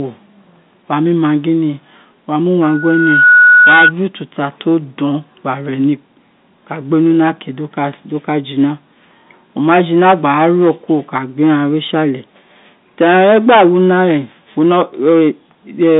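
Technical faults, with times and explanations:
Throughout: hard clipping. The speech is driven about 13 dB past what a stage in the chain can pass, so a small share of samples on the loudest parts are cut flat. Those squared-off peaks add harmonics, heard as harsh, crackling fuzz on stressed sounds.
2.63 to 3.93 s: loudspeaker feedback squeal. A microphone is picking up its own loudspeaker, and the loop gain passes unity at 1.5 kHz. That tone swells over roughly 0.7 s into a steady squeal sitting about 5 dB above the speech.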